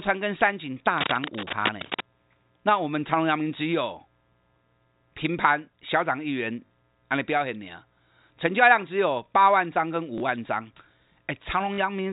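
From 0.97 to 2.01 s, dense, uneven scratching rides over the speech only slightly below its level, likely cable scratch noise from a worn connector shifting contact resistance. The telephone-band G.711 coding underneath is clean. At 6.66–6.70 s, 10.18–10.20 s and 11.74–11.78 s, packet loss with the last packet repeated produces short robotic stutters at the first and last, and a small blip at the second. The 40 ms and 20 ms gaps fit one or two lost 20 ms packets.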